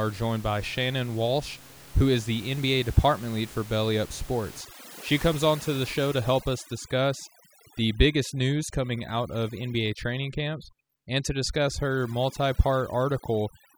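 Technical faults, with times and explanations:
4.61 to 13.78 s, overdone noise removal: From 4.61 s to the end, the room noise, which sits about 20 dB below the speech, drops and breaks up into twinkling specks. A noise reduction stage is set too strong. It pushes individual frequency bands far down whenever they come close to its noise estimate. The quieter parts of the speech fall into that range and get cut too.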